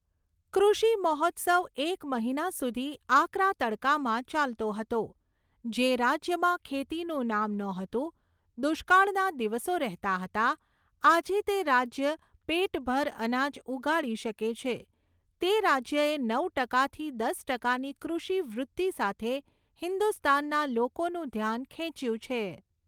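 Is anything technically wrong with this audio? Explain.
No, nothing technically wrong can be heard in this speech recording. There is no moment in the clip where a fault shows up.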